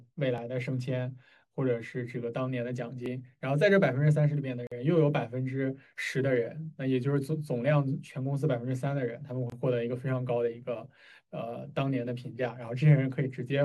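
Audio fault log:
0.38 s and 3.06 s, dropped buffer (overrun): The sound jumps ahead. A few milliseconds are likely missing, with the two sides joined directly.
4.67–4.72 s and 9.50–9.52 s, gap at a join of encoded pieces: Silences of 46 ms and 24 ms with smeared edges. Separately encoded segments kept their padding at each join.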